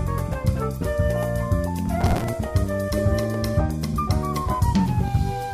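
Processor overload crackle runs from 2.01 to 2.29 s in the audio. For just under three tenths of a second, a gritty, tearing crackle rides on the sound, then stops. The processor could not finish its small audio buffers on time, and many deadlines were missed in a row. Each miss repeated a scrap of old audio with hard edges. The grain suggests buffers of around 5 ms, with about twenty of them missed.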